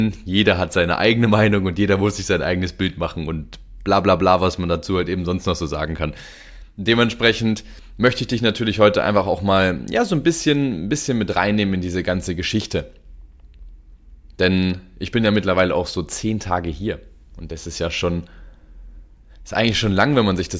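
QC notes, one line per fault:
Nothing to flag here, the audio sounds fine all the way along.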